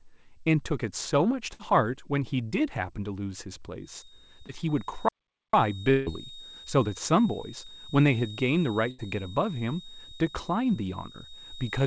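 Speech passed through a wideband call path whose band stops at 8 kHz, consistent with G.722 at 64 kbps. A burst of packet loss hits at 1.54–1.61 s: the decoder extends the last sound for about 53 ms, fading it into a held buzz or hiss, and roughly 60 ms of audio is skipped when playback resumes. A second burst at 8.90–9.00 s is longer, with about 79 ms of faded continuation and around 80 ms missing. From 3.79 s to the end, a thin steady whistle at 3.7 kHz sits around 20 dB below the speech and swells and fades slowly in level. This is a feedback whistle, likely a loudspeaker-to-microphone loop held just short of runaway so that one frequency rings on without building. A short concealed packet loss at 4.47–4.51 s shows as a brief smear where about 13 ms of synthesised continuation covers a 20 ms hole before blending back into the real signal. At 5.08–5.54 s the sound cuts off mid-flow into about 0.45 s of silence, likely a playback stall, with the player starved of data or its thread blocked. 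A likely long network dropout follows at 5.91–6.08 s: roughly 160 ms is filled by a fading extrapolated buzz with no silent stretch, and the audio comes back further on with about 160 ms lost.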